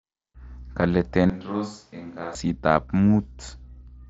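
A short speech recording passed through the mSBC wideband Bluetooth headset codec, with sound band-limited to 8 kHz and a light graininess on louder passages. From 1.30 to 2.35 s the sound turns roomy and hollow, loses bass and drops by about 10 dB, with room noise rising to roughly 30 dB below the speech. This is likely a switch to a distant microphone after the close microphone's signal failed or was left out. The abrupt change in both directions indicates a source change, not a gradual fade. At 2.01 s, inside that stretch, a brief instance of concealed Bluetooth headset packet loss covers a 7.5 ms gap, consistent with a single lost frame. The receiver filled the gap by repeating a matching stretch of recent waveform, so the loss is nearly hidden.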